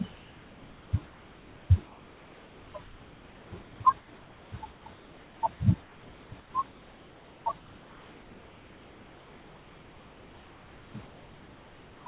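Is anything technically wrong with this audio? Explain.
Yes. Comfort noise in place of the background, from 1.86 to 5.42 s and again from 5.82 to 12.06 s, likely comes from the sender halting transmission in pauses and the receiver synthesising filler noise. The real room background, about 27 dB below the speech and capped at 4 kHz by the narrowband call path, gives way to a flat, featureless hiss.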